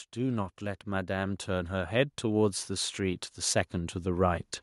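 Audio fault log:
0.13 to 4.53 s, automatic gain rising: the gain control judged the input too quiet and kept raising its gain, so speech and background swell together by about 15 dB.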